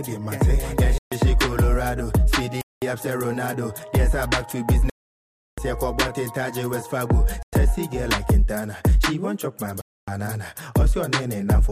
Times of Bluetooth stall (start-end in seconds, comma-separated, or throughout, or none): 0.98-1.12, 2.61-2.82, 4.90-5.58, 7.43-7.53, 9.81-10.08